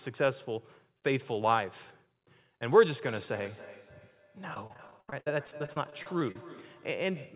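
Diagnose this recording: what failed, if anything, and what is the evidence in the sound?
From 3.03 s to the end, each phrase returns about a third of a second later as a thin, ringing copy, about 19 dB below the speech. This is feedback echo between two devices in the call-processing stage: a second nearby device replays the far side, and this microphone picks it up again, which its own echo canceller cannot remove.

Between 4.54 s and 6.36 s the speech turns choppy and robotic, with short dropouts up to 73 ms recurring throughout and about a quarter of that stretch patched over. This is repeated packet loss on the network. The jitter buffer filled each hole by extending the preceding sound, over the G.711 path's 4 kHz bandwidth.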